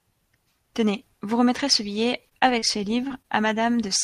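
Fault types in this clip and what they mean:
Repeated packet loss (robotic sound): between 2.29 and 3.26 s the speech is cut by six short gaps, the longest 32 ms, each filled by extending the preceding sound. Because the holes recur within under a second, the result is choppy with pieces missing, unlike one isolated dropout.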